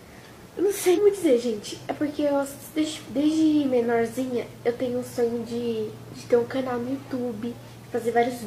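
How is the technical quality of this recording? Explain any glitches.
The recording has two glitches, both compressed frames skipped. At 0.93 s the audio jumps ahead by roughly 200 ms, about five frames' worth. At 6.09 s it skips roughly 50 ms, about one frame, which fits frames around 46 ms long. Those frames were missing or rejected by the decoder, so they never play, and you hear a sudden jump at each join.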